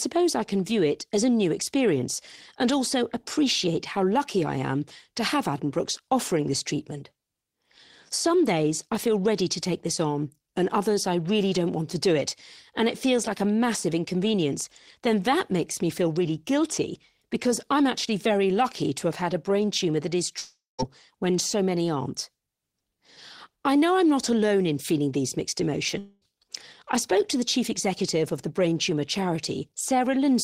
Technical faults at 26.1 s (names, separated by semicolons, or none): long network dropout